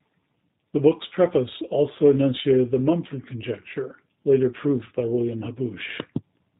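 From start to end, the speech carries plainly audible G.729 codec damage: an 8 kbit/s, 4 kHz band-limited rebuild from filter and pulses, sounding rough and synthetic.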